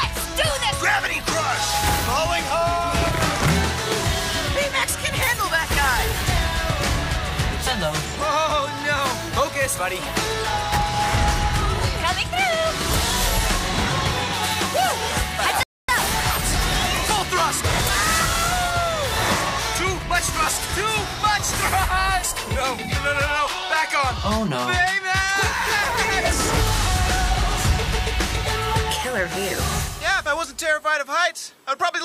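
The audio has a rebuffering stall from 15.63 to 15.89 s: the player ran out of downloaded data, went silent for about a quarter of a second, then carried on exactly where it had stopped, so nothing is missing but 255 ms of dead time is inserted. On a waveform this is a flat silent gap with no fade; on a spectrogram, a clean vertical blank band across all frequencies, with the content either side continuing seamlessly.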